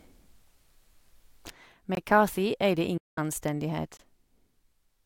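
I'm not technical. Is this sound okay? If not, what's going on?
No. At 1.5 s the whole recording, background included, suddenly drops noticeably quieter and stays that way. This sudden gain jump is likely a volume setting applied instantly instead of gradually.

At 1.95 s and again at 3.97 s there are tiny holes of about 21 ms. This is a gap between chunks, where the sound was handled in 2-second pieces and silence crept in at each join.

From 2.97 to 3.18 s the sound fades out within a few milliseconds and is missing for about 0.19 s. This digital broadcast dropout means that stretch was lost.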